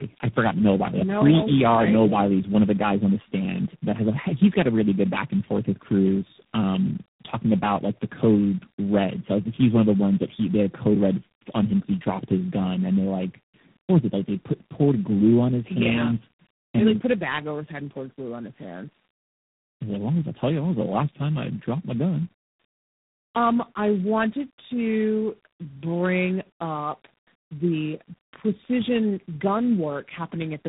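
Throughout the clip, the speech has suffered tandem speech coding: it was decoded and re-encoded at three successive codec stages, each working on the previous one's damaged output. The sound fits an AMR-NB, G.729A and G.726 chain, leaving it rougher, noisier, muffled and warbly, with nothing above 3.8 kHz.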